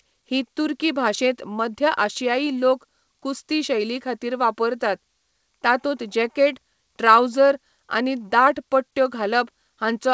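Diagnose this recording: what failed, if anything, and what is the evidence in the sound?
Nothing in the recording has failed. The speech has passed through a call path, and the absence of anything above 8 kHz points to a wideband codec such as G.722 at 64 kbps.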